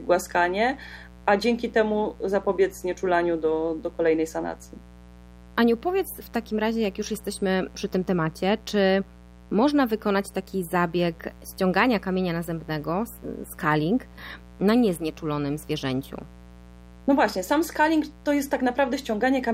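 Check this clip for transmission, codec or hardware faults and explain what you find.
A hardware fault is present for the whole clip: mains buzz. A steady, raspy buzz sits under the speech from start to finish, roughly 25 dB below it. Its harmonics are built on 60 Hz, so the hum has a hard, edgy quality rather than a smooth tone. Sharp switching spikes from something like a dimmer or rectifier, or a gap in shielding, are leaking into the signal twice per mains cycle, spreading energy up into the kilohertz range.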